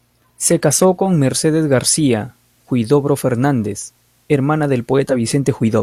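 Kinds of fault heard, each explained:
Digital radio blending to analogue: from 0.95 s to 5.26 s the receiver loses its digital stream and cross-fades over about 225 ms to the station's FM broadcast, so the speech drops about 2 dB and a faint hiss rises, before blending back.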